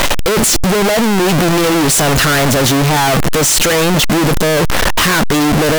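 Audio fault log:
throughout, signed and unsigned mixed up: harsh, very loud distortion over the speech, quiet bits as loud as the rest, likely 16-bit samples read with the wrong sign convention.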